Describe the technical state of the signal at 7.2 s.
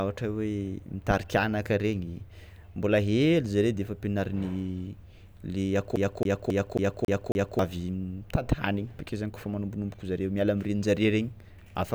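CD stuck on one turn, from 5.96 to 7.59 s: a scratch keeps sending the laser back one track, so the same 0.27 s slice of speech repeats six times, each jump marked by a brief mute, giving the quick, even stutter of a skipping disc.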